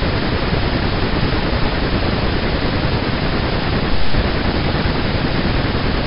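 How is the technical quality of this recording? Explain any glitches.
The technical quality of the recording is good, with no glitches to explain.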